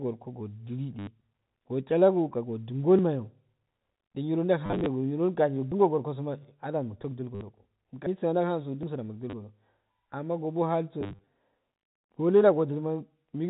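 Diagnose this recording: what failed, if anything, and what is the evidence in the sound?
Network stage: packet loss with last packet repeated, at 0.99–1.07 s (just before "go chalogo ka"), 4.66–4.86 s, 7.35–7.41 s, 9.30–9.33 s and 11.01–11.27 s. Missing packets were filled by replaying the previous one. This produces a robotic stutter that buzzes at a rate fitting 10 ms packets. A spectrogram shows repeated vertical slices and evenly spaced harmonics. The waveform shows identical copied blocks.

Driver or buffer stage: dropped buffer (overrun) at 2.99 s, 5.72 s (just before "goro kasoma") and 8.83 s. At each, the sound jumps ahead by around 40 ms with no gap, most likely because the program collected its buffer too late. On a waveform, each shows as an abrupt discontinuity. On a spectrogram, each shows as a thin full-height line.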